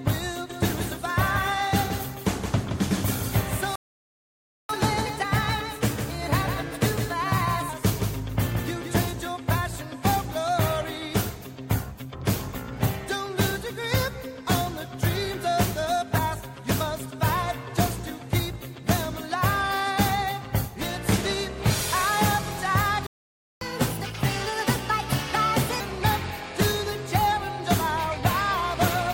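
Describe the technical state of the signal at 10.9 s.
At 10.9 s the signal is intact, with no audible fault at that moment.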